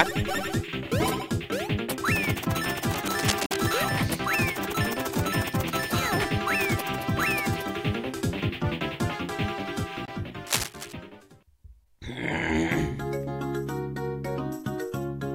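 From 2.83 to 3.75 s a rough, uneven scratching rustles over the sound, only slightly quieter than the sound itself. This is cable scratch noise, likely a worn cable or connector being moved so its contact resistance flickers. Inside that burst, from 3.46 to 3.52 s, the audio cuts out for about 46 ms and resumes as if it had played on. This is a Bluetooth dropout, likely two packets failing to reach the headphones in time. A shorter 23 ms hole of the same kind follows at 10.05 to 10.09 s. From 10.47 to 10.93 s a second cable scratch adds the same rustling bursts.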